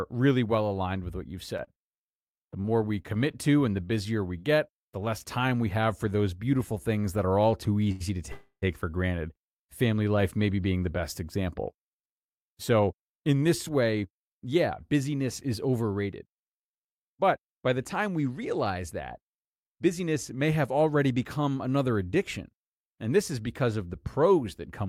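From 1.57 to 3.35 s the speech turns choppy and robotic, which is repeated packet loss. Ten short holes fall in this stretch, the longest 27 ms. Each is patched by continuing the preceding sound, so about 178 ms is synthetic and about 120 ms of real speech is gone. On a spectrogram the harmonics break into short flat, smeared segments with hard edges. The waveform shows repeated periods butting against abrupt joins.

At 7.92 to 8.02 s, just after "that are all too", there is a short stall from a late packet. The jitter buffer ran dry, and the last sound was stretched for 85 ms until the packet arrived. Playback then resumed where it had stopped, so nothing is lost. It sounds like a syllable held slightly too long with a faint buzz. A spectrogram shows the harmonics frozen flat across that span.

From 8.32 to 8.64 s comes a call audio freeze, ending just before "for granted family life". 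It is likely caused by packets held up in transit, which emptied the jitter buffer. The final sound is extended into a fading buzz that drops to silence for its last 80 ms, inserting 300 ms in all without losing speech. The waveform decays to a flat line. The spectrogram shows stretched, dimming harmonics and then an empty band.

Two jitter buffer speed-ups follow. The receiver snipped out pitch-period-sized pieces again and again to cut excess delay, so the speech hurries along at unchanged pitch. From 12.87 to 14.94 s it runs at 110% speed, with roughly a fifth of a second removed. From 19.66 to 20.43 s, between "time we realize that" and "have already become another", it runs at 107%, with around 50 ms removed. On a spectrogram, syllables and pauses look compressed in time while the harmonic spacing stays the same.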